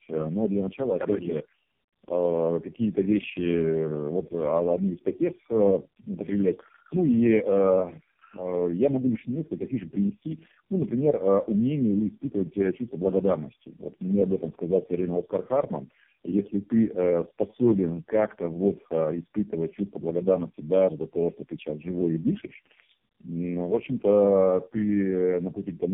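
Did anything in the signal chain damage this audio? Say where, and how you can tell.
Yes: tandem speech coding throughout, at the codec stage. Muffled, warbly speech with nothing above 3.2 kHz suggests three low-rate coders in a row, each re-encoding the last one's degraded output.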